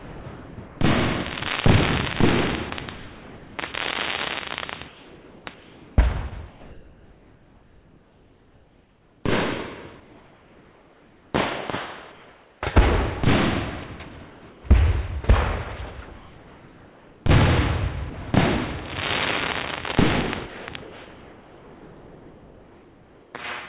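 From 0.0 to 0.8 s the sound is chopped by the voice detector, with about 640 ms swapped for flat synthetic noise. The likely cause is a sender gating parts of the sound as silence. On a waveform the envelope breaks into short, level blocks. The spectrogram shows detailed texture alternating with uniform grey, all sitting below the 4 kHz ceiling of the telephone-band call codec.

The same choppy gating returns, likely from the same detector, between 2.7 and 9.24 s, replacing about 4 s in total, and between 16.06 and 18.34 s, replacing about 1.2 s.

From 14.3 to 14.64 s, comfort noise replaces the background. The real ambience gives way to steady, featureless hiss, likely generated by the receiver during a transmission pause. The spectrogram shows an evenly smeared band with no fine structure.

At 20.46 s, sound is dropped by the voice detector. For 220 ms, until 20.68 s, the sound vanishes into steady noise, likely because the sender misjudged it as background. 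The waveform shows an abrupt flat stretch. Comfort noise then covers the background from 20.46 to 23.34 s, so a smooth, uniform band persists to near the end.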